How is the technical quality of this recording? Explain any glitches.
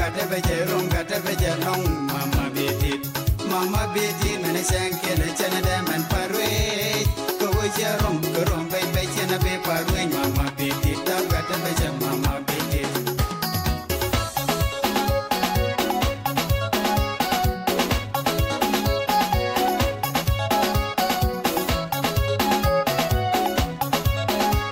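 The recording carries one fault, computer activity noise, present throughout the clip. A faint buzzing, chirping texture sits underneath the sound, roughly 40 dB below it, pulsing at around 70 Hz. It happens when processor, graphics or mouse load swings push the audio circuit's shared ground around, so the noise follows the computer's activity rather than the audio. On a spectrogram it shows as evenly spaced harmonic lines or vertical striations; in the waveform, as fine regular ripples during quiet passages.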